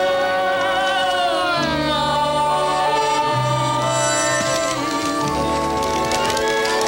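No audible technical faults occur anywhere in the recording.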